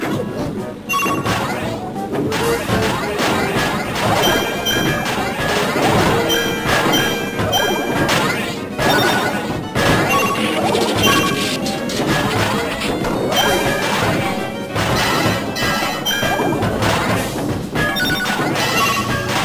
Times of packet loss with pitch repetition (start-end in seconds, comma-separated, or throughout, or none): none